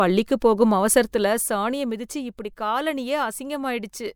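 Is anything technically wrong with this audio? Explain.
Yes. From 0.97 to 2.02 s the speech carries a rapid ticking, a faint zipping texture that rides on top while the level drops by roughly 10 dB. This is zipper noise: the gain moves in 2 dB steps, around seven per second, with no smoothing between them, so each jump lands abruptly on the waveform and leaves a small click. The fade itself is audible, but it arrives as a ladder of discrete steps.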